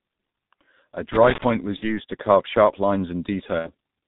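Speech passed through the G.723.1 codec at a heavily damaging low rate, consistent with roughly 6.3 kbit/s, leaving the whole clip muffled, hoarse, band-limited below 4 kHz and smeared at consonants. From 1.12 to 1.44 s, loose connector crackle: an intermittent contact chops the signal into an irregular scratchy burst. VoIP packet loss concealed by the speech codec occurs at 1.76 to 1.99 s and at 3.59 to 3.69 s. Each time, about 60 ms went missing, which fits two lost 30 ms frames. The decoder filled each gap with a fading extrapolation, and the sound stays weak and distorted briefly afterwards.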